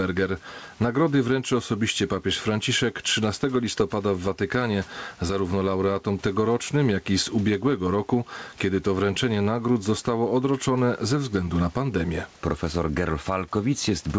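Throughout the speech, gain pumping: the input gain was likely set far too high, and a fast limiter keeps dragging it down on every loud syllable. The level swings by around 10 dB, leaving the speech squashed and flat in dynamics, with the room noise about 36 dB below the speech.

From 5.28 to 5.31 s there is a short concealed packet loss, just before "laureatom tegorocznym jak i". About 20 ms of audio never arrived in time, and the receiver bridged roughly 10 ms of it by extending the preceding sound before blending back in. It comes across as a brief smear or wobble at that point. Nothing above 8 kHz survives, which fits a wideband call codec.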